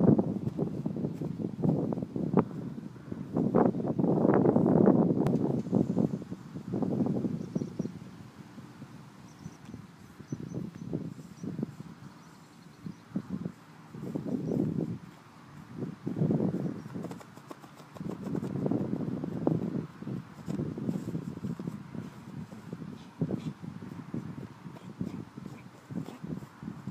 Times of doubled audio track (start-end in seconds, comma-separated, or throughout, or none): 5.27-9.57